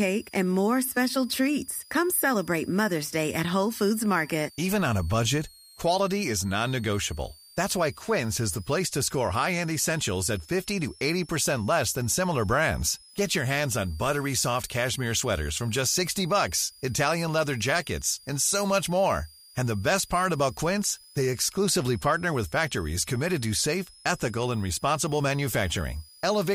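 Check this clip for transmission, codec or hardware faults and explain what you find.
One hardware fault is present throughout the speech: a switching supply whistle. A high tone wanders between 4.22 and 5.4 kHz, sitting around 5 kHz and roughly 25 dB below the speech. This comes from a switching power supply dropping into an audible burst mode or beating with another converter, so its pitch shifts as the load changes.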